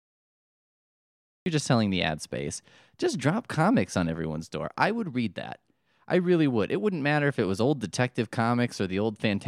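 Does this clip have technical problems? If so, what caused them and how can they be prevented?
Yes, there's a cut-off start. The clip sits in dead digital silence until about 1.46 s, then the speech jumps straight in partway through a sound, with no natural attack or fade-in leading up to it. That points to capture kicking in late: the recorder or stream wasn't actually writing audio when the speaker began, so the first bit got lost. To prevent it, start recording a second or two before anyone talks, or use pre-roll buffering.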